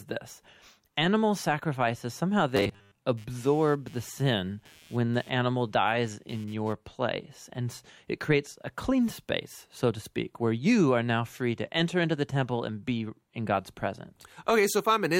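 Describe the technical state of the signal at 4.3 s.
Computer activity noise runs from 3.17 to 6.73 s: a buzzy chirp near 150 Hz, about 30 dB below the speech, following the computer's load through shared ground rather than the talker.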